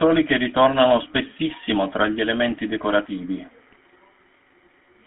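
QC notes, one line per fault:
throughout: GSM full-rate codec. The signal passes through the first-generation GSM speech coder at 13 kbps in a 250 Hz to 3.4 kHz band, giving buzzy, gravelly, narrowband speech.
1.52–1.56 s and 3.70–3.78 s: GSM bit errors. Corrupted frame parameters reach the decoder, bending the spectrum and level, so the speech briefly squawks and gargles, longer at 3.7 s.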